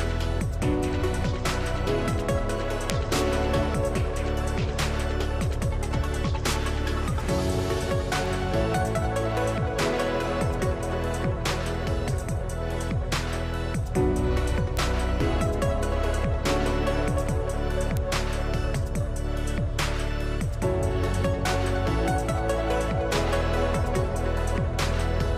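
At 2.90 s there's a sharp tick that peaks at about -2 dBFS, and it's the loudest of the lot. It sounds like a bit error spike smeared over a few consecutive samples. Three more single ticks follow at 8.26 s (about -21 dBFS), 14.77 s and 17.97 s (both about -8 dBFS). Each is a flipped bit making the sample value jump by a power of two and snap straight back, so you hear a brief broadband click that has nothing to do with the surrounding sound.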